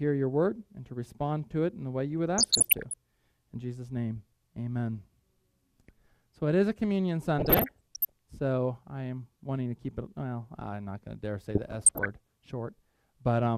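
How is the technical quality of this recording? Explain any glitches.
Three bursts of DAB burbling spoil the recording, at 2.38 to 2.94 s, 7.39 to 8.12 s and 11.51 to 12.27 s. Weak reception let bit errors slip past error correction into the MP2 data, around one percent in the first burst and about half that later, corrupting samples and scale factors. Individual sub-bands then leap in level frame by frame, so each stretch is marked by short blips of noise over the sound.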